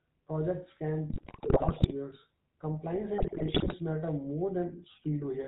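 GSM full-rate codec damage runs through the whole of this speech clip. The coder represents the vocal tract as a filter and drives it with a sparse, evenly spaced pulse train, keeping only a third of the excitation samples and passing nothing above 4 kHz. The result is a plainly audible buzzy, gravelly roughness over a dull, band-limited top end, consistent with the 13 kbps full-rate coder.

GSM bit errors hit from 1.1 to 1.92 s and again from 3.18 to 3.75 s. Flipped bits reached the decoder, so it applied corrupted filter, pitch and gain values frame after frame. That bent the spectrum and sent the level jumping. Both stretches break into squawks, pops and gargling. The density of the damage points to a badly degraded radio link, with the second burst slightly heavier than the first.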